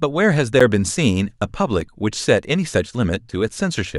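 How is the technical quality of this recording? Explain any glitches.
Two short dropouts in the speech. At 0.60 s and 1.81 s there is a block of digital silence, about 10.7 ms and 5.3 ms long, which fits 512- and 256-sample buffers the program failed to fill in time. The signal drops abruptly to zero and returns, so each gap is heard as a brief tick.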